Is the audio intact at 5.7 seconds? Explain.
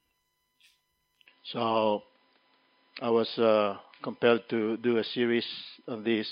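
No. From 1.26 s to the end of the clip, the sound has the signature of an input switched to a poorer device, likely a change to another microphone or a headset's call profile. Nothing above 5 kHz gets through, so it turns dull and boxy. The level shifts by roughly 5 dB, and a new noise floor sits around 45 dB below the signal. Unlike a plain filter or a codec's bandwidth drop, the tone, level and background all change together at one instant, with no gap at the switch.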